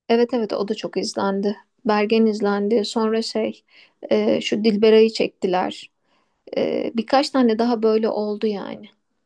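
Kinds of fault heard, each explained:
No technical faults heard.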